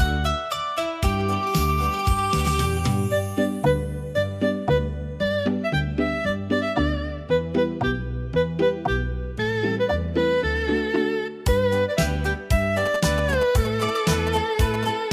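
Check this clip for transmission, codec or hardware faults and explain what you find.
One fault is present, GSM signalling bursts. From 12.86 to 14.85 s, galloping ticks and short 217 Hz buzzes sit about 10 dB down. The audio circuitry is rectifying signalling bursts from a nearby 2G phone.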